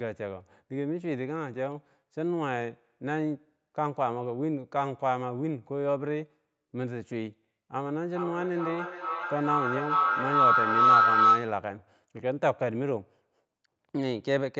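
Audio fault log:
7.72 to 11.72 s feedback howl: a loop from microphone to loudspeaker between two devices in the room gains level on each pass, so a tone near 1.5 kHz swells to about 9 dB above the speech, with the loop repeating roughly every 400 ms. A spectrogram shows a single bright horizontal line, and the waveform shows a swelling envelope.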